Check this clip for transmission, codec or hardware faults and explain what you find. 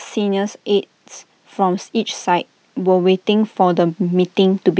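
One fault stands out: automatic gain rising. From 1.55 s to 4.7 s the speech and background swell together by about 5 dB, as the call's gain control judges the input too quiet and slowly raises it. The call microphone processing leaves nothing above 8 kHz.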